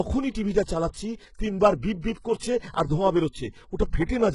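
From start to finish, the speech carries heavy codec damage, likely from HE-AAC compression at a very low bitrate, which fits roughly 12 kbps. The upper band is a rebuilt copy of lower bands rather than the original, so s sounds turn gritty and lispy and the treble has a metallic sheen. On a spectrogram, the top region shows repeated, blurred patches of lower harmonics that do not line up with them, and nothing appears above 11.1 kHz.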